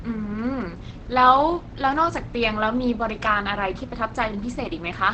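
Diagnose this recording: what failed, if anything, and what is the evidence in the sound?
The codec stage failed, most likely through Opus compression in its SILK speech mode. The speech sounds muffled and hoarse throughout, and a spectrogram shows a flat ceiling with nothing above 8.5 kHz. That wideband limit fits a starved bitrate near 16 kbps forcing speech-model coding.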